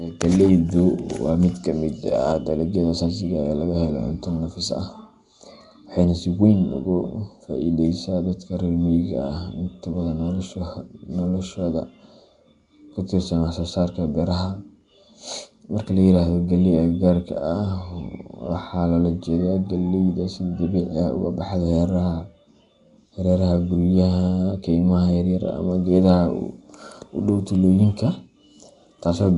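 Nellymoser compression runs throughout: the speech has a rough, hissy halo and a smeared, underwater quality, with nothing above 10.6 kHz. The likely cause is Flash's Nellymoser Asao codec, whose fixed bit budget leaves weak bands to be filled with noise, consistent with about 44 kbps.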